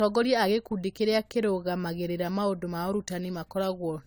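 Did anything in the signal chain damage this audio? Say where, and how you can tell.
Yes, at the codec stage: this speech shows generation loss from repeated lossy encoding, likely around seven passes through an AAC-LC codec at about 96 kbit/s. Fresh quantisation on shifting frame grids piles up, so throughout it sounds swirly, hollow and smeared, with blurred consonant attacks.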